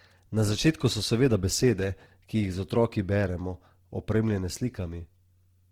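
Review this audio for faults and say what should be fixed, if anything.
Across the whole speech, the signal was most likely run through Opus compression in its CELT mode, at a rate that fits about 16 kbps. Short of bits, it fills bands with folded or noise content, so speech turns plainly grainy and rough, though the bandwidth still reaches 20.2 kHz. Encoding at a higher bitrate would prevent it.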